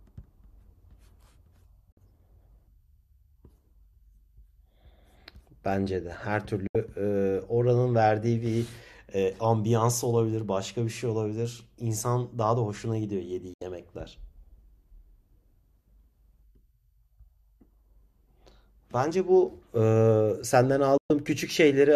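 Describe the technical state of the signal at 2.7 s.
At 2.7 s the speech signal is intact, with no dropout, clipping, distortion or other fault audible at that moment.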